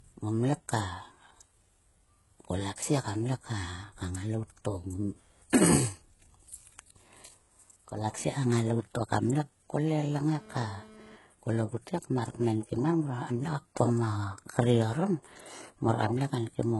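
From start to finish, nothing sounds above about 11.5 kHz. The top end is simply missing. The sound also carries the artefacts of an earlier encoding. The file is large, yet it sounds thin and processed. The likely cause is low-bitrate audio saved at a high bitrate. A heavily compressed earlier encoding removed detail, and a later high-bitrate encoding kept its damage. Re-saving cannot bring back what was removed.

From 10.33 to 11.16 s, a hard, raspy buzz cuts in. This is GSM phone buzz. A nearby 2G phone transmits radio bursts about 217 times a second. The audio circuit rectifies those pulses into sound. The result is a 217 Hz tone rich in harmonics, about 23 dB below the speech. It is unrelated to the speech. It comes and goes, which fits a data transfer. It stops just before "kol ogut he mar".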